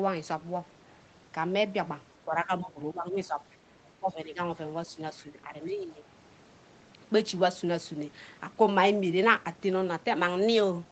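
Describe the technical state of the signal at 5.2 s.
At 5.2 s the speech sits inside a stretch of speech suppressed in double talk, running from 4.87 to 6.03 s. The level dips in pieces, at its deepest by roughly 10 dB, for about 0.7 s in total. The likely cause is an echo canceller that, with both sides talking at once, could not tell this talker from loudspeaker echo and turned both down. Unlike a packet dropout, the sound thins and ducks unevenly instead of vanishing abruptly into silence.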